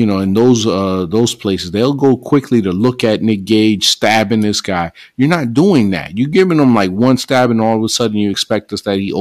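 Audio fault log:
Throughout, hard clipping: the speech is driven about 12 dB past what the stage can pass, so roughly one percent of samples hit the ceiling and their peaks are sliced flat. Those flat tops add high harmonics, heard as crackle and rasp on the loudest syllables.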